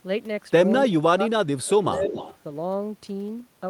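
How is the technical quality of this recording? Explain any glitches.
The recording has two kinds of call-processing glitches.

From 0.79 to 1.23 s, and briefly from 1.98 to 2.02 s, there is speech suppressed in double talk. The echo canceller likely could not tell the talker from loudspeaker echo while both sides spoke, so it turned everything down. The voice dips by up to about 20 dB in the first stretch and by a slighter, roughly 5 dB, in the second.

From 1.65 to 2.37 s there is echo leak. An echo canceller at a speakerphone end likely failed to remove all the loudspeaker sound its microphone picked up, and sent it back. A copy of the voice trails 273 ms behind, about 10 dB quieter than the direct speech.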